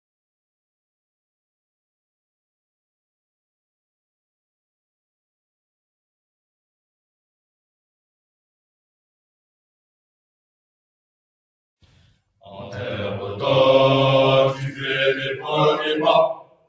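Throughout, the sound pumps and thins, with held parts and decaying tails sinking by around 10 dB while sharp onsets mostly come through. A noise suppressor applied to music or sounds is the cause: a speech-oriented noise reducer treats steady tones and ambience as noise and keeps pulling them down. Near the end, the sound is cut by the noise suppressor in four places: 14.53–14.85 s (dipping about 9 dB), 15.14–15.58 s (about 12 dB), 15.75–16.06 s (about 6 dB) and 16.31–16.69 s, where it falls about 20 dB. The band limit at 8 kHz comes from call microphone processing.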